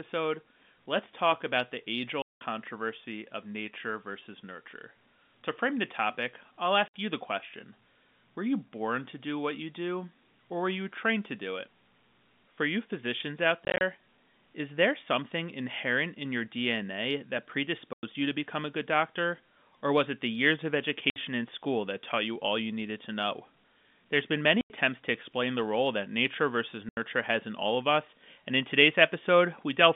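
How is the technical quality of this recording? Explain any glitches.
The recording's technical quality suffers from seven dropouts caused by packet loss filled with silence. The speech comes through a telephone-band G.711 path, audible as a narrow band from about 150 Hz to 3.6 kHz. The gaps are at 2.22 s (190 ms), 6.88 s (60 ms), 13.65 s after "you physicians out" (100 ms scattered across 160 ms), 17.93 s before "you to become a" (100 ms), 21.10 s (60 ms), 24.61 s before "to explain the role" (90 ms) and 26.89 s (80 ms). Every hole length is a multiple of 10 ms, which fits 10 ms packets that never arrived and were replaced by nothing. Unlike concealment, which smears or repeats the last sound, each gap is dead silence with abrupt, hard edges.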